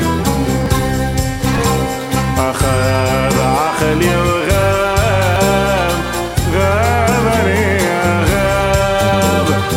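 At 0.66 s, 1.58 s and 5.36 s the sound jumps forward, losing about 20 ms at the first two points and about 40 ms at the third. The likely cause is a dropped buffer (overrun): samples were overwritten before the program collected them, so the audio on either side is spliced together. Unlike an underrun, no silence or gap is heard. The sound simply skips ahead.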